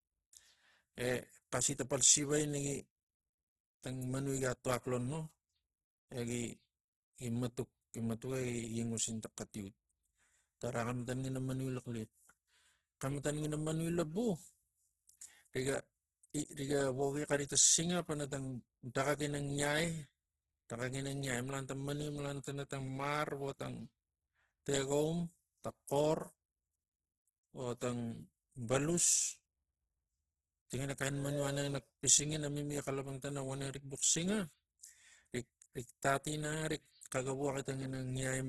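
Throughout, the speech sounds grainy and rough with nothing above 12.2 kHz, likely heavy Opus compression that fills starved bands with noise, fitting roughly 12 kbps.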